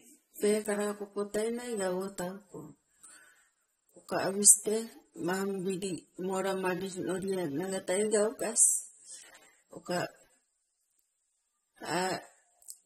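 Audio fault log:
Throughout: AAC compression. The speech sounds dull and smeared, with a fizzy, warbling edge on sibilants and sustained sounds, which fits a low bitrate of about 32 kbps. The cause is likely AAC-LC, whose quantiser discards detail the hearing model deems masked. On a spectrogram the energy ends sharply at 16.5 kHz, and patchy holes and blocky, noise-filled bands appear in the upper range. The waveform looks unremarkable.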